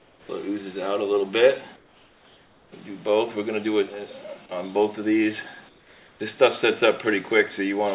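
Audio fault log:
0.00–0.29 s, 1.76–2.72 s and 5.69–6.20 s, comfort noise in place of the background: in each pause the real background, which sits about 31 dB below the loudest sound, gives way to a smooth, detail-free hiss about 8, 6 and 5 dB quieter respectively. The likely cause is discontinuous transmission, with the receiver synthesising noise while the sender stays silent. A noise gate would leave true silence. Here a steady synthetic floor remains, band-limited like the rest of the telephone-band audio, with nothing above 4 kHz.
0.27–0.29 s, onset clipped by the voice detector: the sound returns abruptly out of the comfort noise, missing roughly its first 20 ms, so its soft leading edge never arrives. This is likely because the voice detector reacted late and that opening slice was never sent, leaving synthetic noise in its place. A slow fade-in or a gate's attack would still ramp up gradually. 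This onset is simply cut, with a hard step from the featureless hiss straight into the sound.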